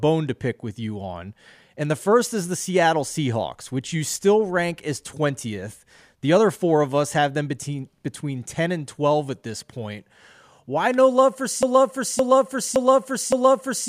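At 11.63 s, right after "no love for", a broken-record loop takes over and runs to the end of the clip. A fragment of about 0.57 s repeats four times back to back, and the speech that should follow is lost. The likely cause is a stalled player or stream resending its last buffer. On a waveform and spectrogram, the same block appears as identical tiles spaced 0.57 s apart.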